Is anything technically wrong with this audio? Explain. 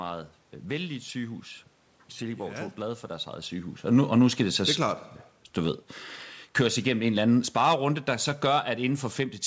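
Yes. From 6.47 s to the end, there is automatic gain falling. The gain control judged the input too loud, or its background noise too strong, and gradually lowered its level, so speech and background sink together.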